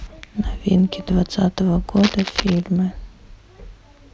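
From 1.96 to 2.60 s there's cable scratch noise: a dense, ragged burst of scratching and rustling riding over the speech, only about 10 dB under it. Likely a worn cable or connector shifting, its contact resistance jumping around and spraying noise into the signal.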